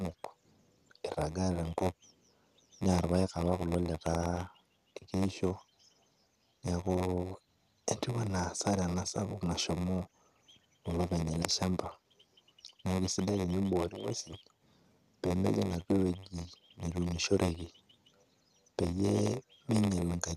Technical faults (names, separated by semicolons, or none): block size mismatch (padded)